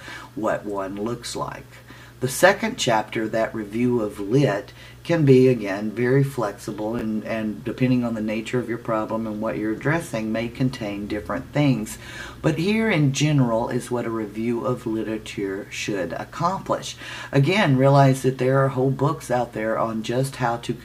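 At 6.99 to 7.01 s, chunks out of order: one 10 ms chunk plays one chunk late, after the chunk meant to follow it. The swap creates three abrupt joins, heard as a brief jumbled moment. The waveform shows discontinuous steps, and the spectrogram shows thin vertical broadband lines.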